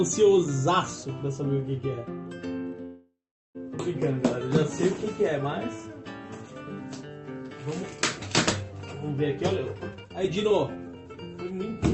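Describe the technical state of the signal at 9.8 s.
The sound is running noticeably fast and hurried here, at about 127% of normal speed with its pitch unchanged. This is a jitter buffer speed-up spanning 9.38 to 11.77 s: the receiver repeatedly cut out short pitch-period slices, dropping roughly 0.7 s in total to shrink an overfilled buffer.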